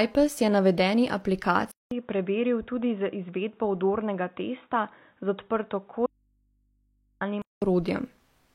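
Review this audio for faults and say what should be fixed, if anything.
Input switched to a poorer device, 1.71 s to 7.62 s: the speech suddenly turns dull and boxy after a 200 ms silence, with nothing above 3.8 kHz and a level about 5 dB lower. It sounds as if the recording likely jumped from the main microphone to a lower-grade input such as a headset's call profile, which passes a narrower band and adds its own faint background noise well below the speech. Full brightness returns at 7.62 s. To prevent this, lock the recording to one fixed input device and disable automatic device switching.

Audio dropout to a faint residue, 6.06 s to 7.21 s: the speech cuts out abruptly for about 1.15 s, and the gap holds only mains hum roughly 45 dB below the normal speech level. This is not a pause or a fade. The signal was lost while the path after the break stayed live, so the open input's hum came through on its own. 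The likely cause is a momentary loss of the source feeding the already-degraded input. To prevent this, check cable and connection integrity and monitor the input for signal loss during recording.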